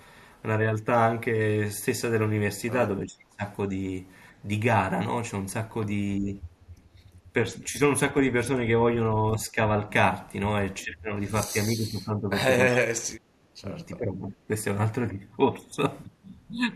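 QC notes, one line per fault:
3.05–3.44 s, 6.2–6.36 s, 7.43–7.8 s, 9.09–9.86 s, 10.84–11.15 s, 11.48–12.38 s, 12.72–14.49 s, speech suppressed in double talk: the voice dips, by roughly 25 dB at 3.05 s, only slightly at 6.2, 7.43 and 9.09 s, and deepest, roughly 35 dB, across the long stretch ending at 14.49 s. The likely cause is an echo canceller mistaking overlapping far-end talk for echo and attenuating both. The waveform shows notched, hollowed envelopes, and the spectrogram shows harmonics thinning or vanishing in patches.
6.82–7.24 s, background gated by the echo canceller: the room tone ducks by about 12 dB for roughly 300 ms, then recovers once the canceller releases. Its suppressor clamped the microphone hard while loudspeaker playback was present, so the ambience momentarily collapses. The spectrogram shows a brief, full-band darkening of the noise floor, and the waveform's low-level baseline narrows visibly before recovering.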